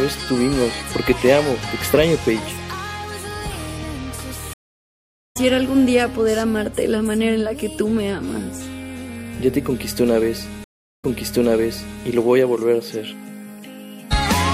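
At 4.53 s the sound drops out for about 0.8 s and resumes roughly 0.7 s further on. At 10.64 s a 0.38 s gap returns about 1 s earlier, replaying material. Both are stream reconnects, where the player lost the connection and restarted its decoder mid-stream.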